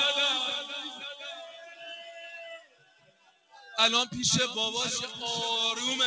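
From start to finish the level pumps and flutters: sustained parts and decaying tails keep sinking while sharp onsets punch through, so the sound thins and swells by around 15 dB. A noise suppressor built for speech has been applied to music or sounds. It mistakes steady tones, ambience and reverb for background noise and pulls them down, passing mainly the attacks. Above this the sound is empty past 8 kHz, as expected through the G.722 call path.

Three passages are hit hardest as sound cut by the noise suppressor. From 0.92 to 1.83 s the held material sags by about 9 dB. From 2.0 to 2.35 s there is a milder dip of about 5 dB. From 2.58 to 3.61 s the deepest loss arrives, about 15 dB, with decays chopped short. In each passage the suppressor treated the lingering sound as noise and attenuated it more heavily than the transients around it.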